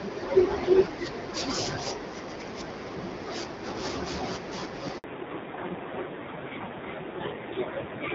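At 4.98 s the speech cuts out into silence for 60 ms until 5.04 s, a handover gap where no speech frames arrived while the call switched networks. From 5.04 s to the end, the speech turns duller and rougher with nothing above 4 kHz, compared with the lightly coded AMR-WB HD Voice before it. This fallback to narrowband points to a drop from AMR-WB at 12.65 kbit/s to AMR-NB at 7.4 kbit/s.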